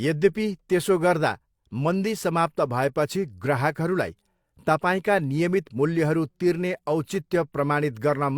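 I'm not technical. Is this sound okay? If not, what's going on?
Yes, no technical faults are audible anywhere in this speech recording, so there's nothing wrong with it to fix.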